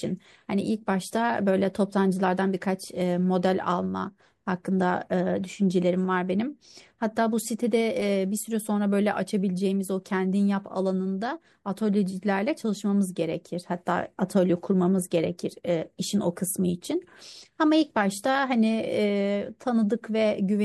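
No audible technical faults anywhere in this recording.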